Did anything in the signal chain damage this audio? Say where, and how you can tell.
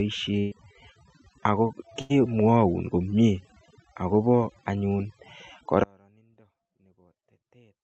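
Yes. Overdone noise removal in call processing runs throughout: the background sits near silence with twinkling specks, and quiet parts of the speech are cut along with the bands.

Two bursts of packet loss on the network leg, at 0.39–0.53 s and 2.01–2.12 s, are each concealed by a held, fading continuation, and about 120 ms and 80 ms of audio are skipped.

An audio dropout to a faint residue begins abruptly at 5.84 s and lasts to the end, leaving only faint sound about 35 dB down, likely a signal lost upstream while the path stayed live.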